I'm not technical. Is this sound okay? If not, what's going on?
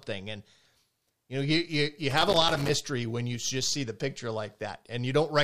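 No, there's a loose connector crackle from about 2.10 to 2.74 seconds, right after "know you you you" and just before "when you just see". It sounds like a short, uneven burst of scratching and crackling. It happens when a worn or dirty plug or socket shifts slightly and keeps losing and regaining contact. The sound gets chopped on and off very quickly.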